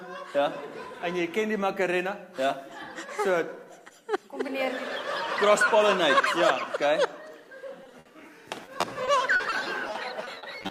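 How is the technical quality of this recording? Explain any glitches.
The quality suffers from repeated packet loss (robotic sound) in two stretches. From 7.83 to 8.07 s, packets went missing in quick succession, and the receiver patched each hole by stretching the last received sound, with gaps up to 60 ms and roughly 40% of the stretch concealed. From 8.65 s to the end, the losses were shorter, up to 40 ms, but more numerous, with about a sixth concealed. Both stretches sound choppy, with pieces missing.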